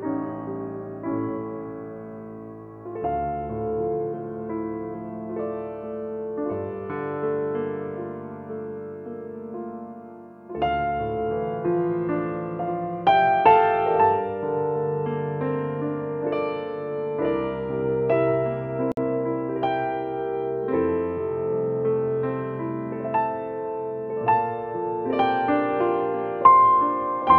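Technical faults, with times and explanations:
18.92 to 18.97 s, gap at a join of encoded pieces: a silence of about 55 ms cuts into continuous sound, with smeared edges, and the sound then resumes where it stopped. Two separately encoded segments were butted together with the encoder's start delay and final-frame padding left in.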